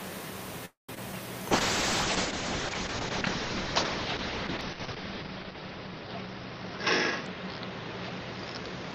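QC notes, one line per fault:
0.65–0.91 s, call audio freeze: the sound stretches into a fading tail, then about 140 ms of silence. Nothing is lost, likely from packets held up in transit.
0.95–0.98 s and 1.12–1.14 s, short concealed packet loss: brief smears where about 20 ms and 40 ms went missing and were patched by extending the preceding sound.
1.52–8.94 s, call bitrate drop: the encoder falls from 48 to 6 kbps. The top end shrinks from 20 kHz to 6 kHz, so the audio turns muffled and rough, bottoming out for 3.41 s.
4.75–5.19 s, jitter buffer slow-down: repeated pitch periods add 37 ms. Playback runs at 93% speed with unchanged pitch, so the sound drags slightly.
7.34–8.93 s, jitter buffer speed-up: short pitch periods are cut, about a tenth of a second in total. Playback runs at 106% speed, so the sound feels hurried.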